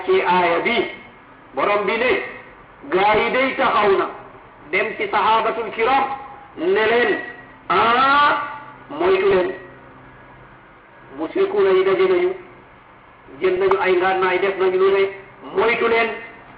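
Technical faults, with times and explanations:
3.03 to 3.19 s, 9.31 to 9.48 s and 13.57 to 13.72 s: DAB burbling, three short bursts of burbling. Weak reception lets bit errors slip past the error correction into the MP2 audio data, at a rate of only a fraction of a percent. Corrupted samples put short blips of noise in single sub-bands, and corrupted scale factors make sub-bands leap in level for up to a frame, and these bursts run for roughly 0.15 s each.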